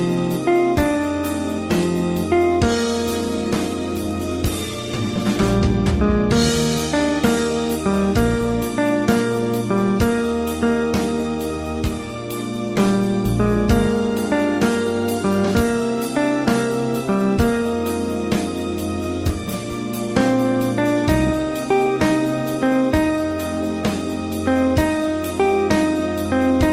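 From 3.12 to 5.57 s there's a call bitrate drop: the encoder starved of bits, the audio goes coarse and dull, consistent with falling from about 32 to 15 kbps.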